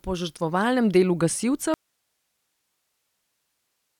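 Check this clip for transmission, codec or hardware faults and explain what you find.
One fault: an audio dropout to a faint residue from 1.74 s to the end of the clip, right after "požrtvovalnem delu". The wanted signal was likely lost upstream while the path after the break stayed live, so the speech cuts off abruptly mid-flow rather than pausing or fading. What remains is only hiss, roughly 50 dB below the speech level, carried by the still-open channel and continuing through to the end.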